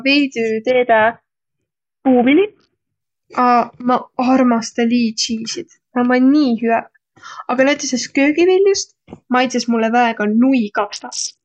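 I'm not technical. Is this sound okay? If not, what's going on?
No, not quite. Twice the speech suddenly goes dull and grainy: from about 0.71 to 3.01 seconds, and again from 10.78 seconds to the very end. That's a Bluetooth SBC bit pool drop. The wireless link got crowded, so the phone squeezed the sound into far less data to keep it flowing. The crisp top end gets thrown away first, and what's left picks up a rough, sandy hiss until the connection recovers.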